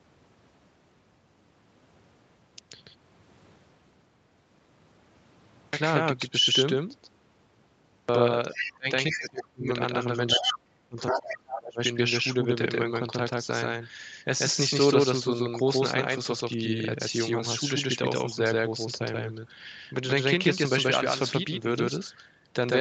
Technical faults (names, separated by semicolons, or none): doubled audio track; clipped start after a pause; other side's voice leaking through; speech suppressed in double talk